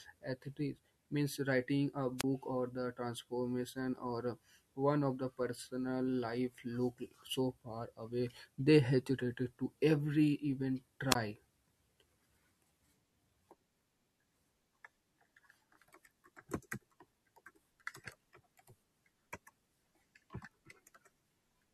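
At 2.18 s the speech breaks into a short burst of hiss and then a hole of near silence about 27 ms long, with the voice back by 2.24 s. At 11.10 s the same thing happens again, with an 18 ms gap, recovering by 11.15 s. These are wireless microphone squelch dropouts. The radio link from the transmitter weakened for a moment, the receiver's squelch treated the fading carrier as lost signal and muted its output, and audio returned once reception recovered.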